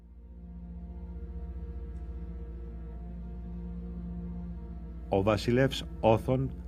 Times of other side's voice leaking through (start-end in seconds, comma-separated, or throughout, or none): none